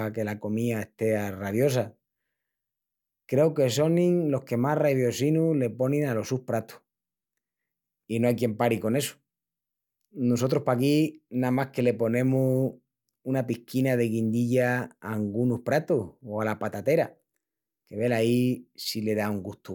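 No technical faults can be heard anywhere in this recording.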